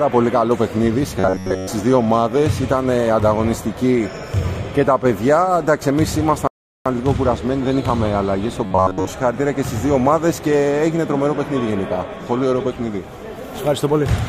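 Three faults stand out in this audio: two bursts of robotic sound from repeated short buffers and one rebuffering stall. From 1.20 to 1.69 s and again from 8.66 to 9.07 s, the sound collapses into a rigid, metallic buzz at 93.8 Hz that still loosely tracks the original contour. The likely cause is a starved playback path looping its last block of about 10.7 ms over and over while most of the real signal in those stretches, roughly two thirds or more, is skipped. On a spectrogram both patches appear as evenly spaced horizontal harmonics locked to multiples of 93.8 Hz. In the waveform they show as a short cycle copied end to end. At 6.47 s a rebuffering stall cuts the sound to dead silence until 6.86 s, after which it resumes exactly where it stopped, adding about 0.38 s to the playback time without losing anything. The waveform shows a flat line there, and the spectrogram shows a blank vertical band with continuous content on either side.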